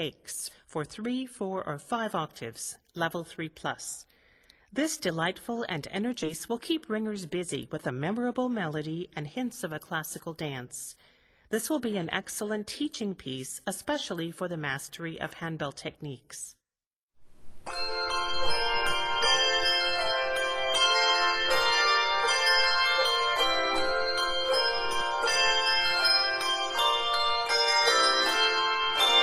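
At 6.23 s there is a skip ahead. Playback jumps forward with no gap where the missing piece would be. Around 0.4 s of sound is simply gone, and the audio on either side is joined almost directly. A stretch was likely dropped in transit or thrown out when the jitter buffer overflowed, while later audio was already queued. The result is an abrupt cut, as if the sound lurched ahead.

From 6.51 s to 8.10 s comes a jitter buffer speed-up. The buffer was holding more audio than it aims for. To reduce that delay, the receiver trimmed many short slices, each one or a few pitch periods long. About a tenth of a second was removed in total. The sound runs at about 106% speed with its pitch unchanged. It comes across as slightly hurried through that stretch.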